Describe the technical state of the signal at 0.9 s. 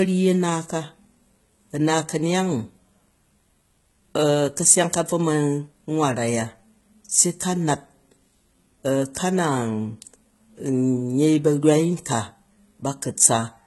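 At 0.9 s you're hearing the same thing that runs through the whole clip: heavy HE-AAC compression is the likely cause. Nothing comes through above about 11.8 kHz, and the treble under that ceiling isn't the real thing. It's lower bands copied upward and shaped by a rough envelope, so its harmonics don't line up with the ones below. The s sounds in the speech come out gritty and metallic, which fits a bitrate down around 16 kbps.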